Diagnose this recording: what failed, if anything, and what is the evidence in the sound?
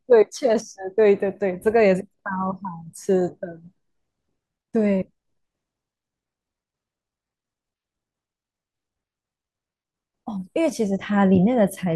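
Nothing failed here: the speech comes through steady and intact, with nothing in the sound to trace back to any stage of the chain.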